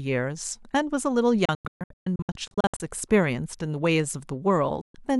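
Between 1.45 and 2.80 s the speech breaks into a string of short silences, each cut in with a fade of about 3 ms. The longest gap is 0.13 s, and about 0.77 s of sound goes missing in total. Another 0.13 s hole falls at 4.81 s. This is a digital broadcast dropout: the receiver muted whenever frames arrived corrupted or missing, so the programme content during those gaps is lost.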